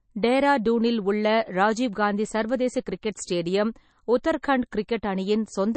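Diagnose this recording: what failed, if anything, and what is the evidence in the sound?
The codec stage is at fault: the speech carries MP3 compression damage from start to finish. There is nothing above 8.3 kHz, so sibilants sound dull and clipped, with a watery, swirling texture and smeared consonant onsets. On a spectrogram, energy stops at a hard horizontal ceiling, with speckled holes where weak bands drop in and out between frames. The likely cause is an encoder starved of bits, which fits a bitrate around 32 kbps.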